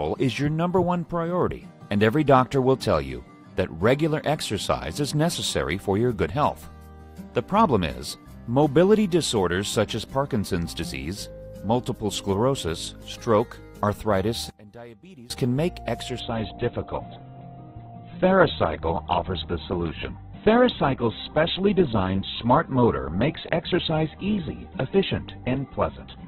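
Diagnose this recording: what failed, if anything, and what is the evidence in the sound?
Between 14.50 and 15.30 s the level suddenly falls by about 22 dB, and the content common to both channels largely vanishes. What remains is a residue, the difference between the two channels. That pattern points to one channel inverted, likely a polarity reversal in the analogue wiring, with the stereo pair summed to mono downstream. Material common to both sides cancels, leaving only what differs between left and right.

From 16.2 s to the end, quality drops abruptly with no gap. Nothing remains above 4.1 kHz, and coding artefacts rise. This is an adaptive stream at a lower bitrate, a network-stage fallback: the player switched to a low-rate rendition when throughput fell. The narrowed band and coarse texture fit a step down from around Opus 64 kbit/s to roughly 8 kbit/s.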